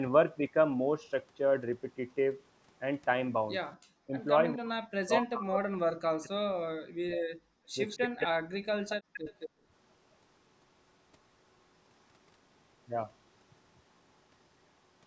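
At 4.06 to 4.13 s the talker's speech dips by about 15 dB for a brief moment, and from 4.56 to 7.31 s it is pushed down far harder, by about 40 dB, breaking up over roughly two seconds of that span. This is speech suppressed in double talk, likely caused by both ends talking at once: the echo canceller cannot separate the local voice from loudspeaker echo, so it attenuates everything it hears.

From 7.59 to 7.72 s the room background is gated by the echo canceller, falling by about 31 dB for a fraction of a second while the loudspeaker plays, then returning once the canceller releases.

From 7.89 to 8.26 s there is an echo leak, likely from the far end's loudspeaker: a delayed copy of the voice, 218 ms behind and about 15 dB below the direct speech, gets past that side's canceller and is sent back.

Overlapping it, from 8.07 to 9.03 s, the speech is suppressed in double talk again, likely for the same reason as before, with drops of about 40 dB over roughly 0.7 s.

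A second echo leak, likely from the same loudspeaker path, runs from 8.89 to 9.49 s. It is again 218 ms late but louder, about 10 dB below the speech.

From 9.49 to 9.65 s the background is gated once more, dipping by about 39 dB.

The call's microphone processing passes nothing above 8 kHz.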